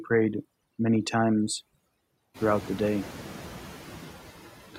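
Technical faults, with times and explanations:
Throughout: overdone noise removal. The reduction is set too hard, switching off bands near its noise estimate. Quiet speech detail vanishes, leaving twinkling specks.
Throughout: noise suppressor artifacts. Bands judged steady noise are lowered by about 8 dB per frame. Noise dips between words and returns beneath them; the room noise rises about 15 dB around two and a half seconds.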